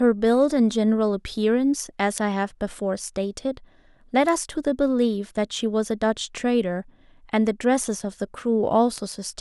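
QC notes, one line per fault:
2.18 s, 4.29 s and 8.98 s: bit error spike. Flipped bits throw one or two samples far off and straight back, giving isolated broadband ticks unrelated to the speech.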